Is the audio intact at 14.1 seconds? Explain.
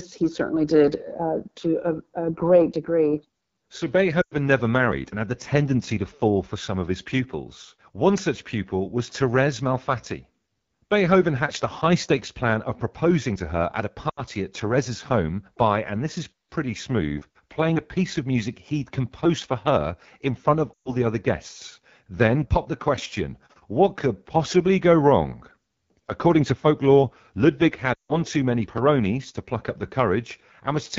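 No. At 14.10 s the audio breaks up from lost AMR speech frames, which run until about 14.22 s. That gap of 80 ms fits four lost 20 ms frames. Radio errors corrupted those frames, so the decoder had nothing valid to play. It repeated the last good pitch and vocal tract settings while lowering the gain. The sound smears briefly and fades quickly toward silence, as wideband concealment does. It then returns weak or rough for a moment.

The moment also carries the damage of the AMR wideband (HD Voice) codec, which runs through the whole clip. The speech sounds rough and raspy. That fits one of the lowest AMR-WB rates, around 8.85 kbit/s. The codec models the vocal tract and drives it with sparse pulses up to 6.4 kHz. Above that, up to 7 kHz, it adds shaped noise. At this rate the pulse coding is too coarse, and the damage is plainly audible.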